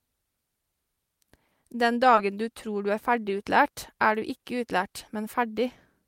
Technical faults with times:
2.15-2.19 short concealed packet loss

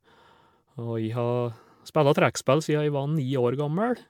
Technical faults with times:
0.00-4.10 generation loss

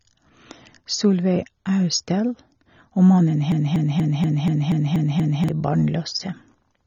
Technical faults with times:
0.00-6.86 AAC compression
3.52-5.48 broken-record loop

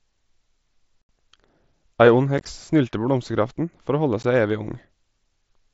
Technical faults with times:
1.09 unconcealed Bluetooth headset packet loss
2.38-2.46 unconcealed Bluetooth headset packet loss
4.23 unconcealed Bluetooth headset packet loss

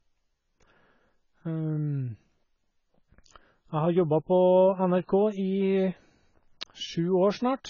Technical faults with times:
0.00-7.70 AAC compression

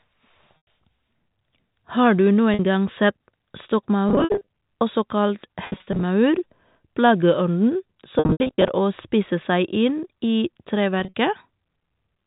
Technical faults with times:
0.57-0.67 packet loss with pitch repetition
2.54-2.59 packet loss with pitch repetition
4.09-4.47 packet loss with pitch repetition
5.65-6.03 packet loss with pitch repetition
8.19-8.69 packet loss with pitch repetition
11.00-11.14 packet loss with pitch repetition

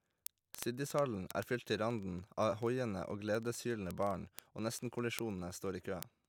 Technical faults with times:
0.10-6.27 word clock ticks

